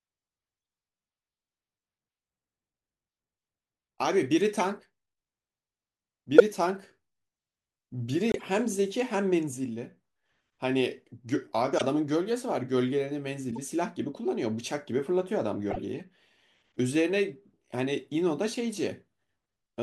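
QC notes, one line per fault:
4.54 to 15.84 s, corrupt frame decoded: five short bursts, at 4.54–4.61, 6.38–6.40, 11.78–11.81, 13.52–13.58 and 15.70–15.84 s. Damaged frames were played anyway. Misread gains put energy at wrong frequencies, giving chirps or noise bursts. The 6.38 s burst is loudest, at about -5 dBFS.
8.31 to 8.42 s, corrupt frame muted: an abrupt hole of silence, 0.12 s long. The decoder refused damaged frames. The player put silence in their place. The gap's length fits about five frames. Timing after it is kept.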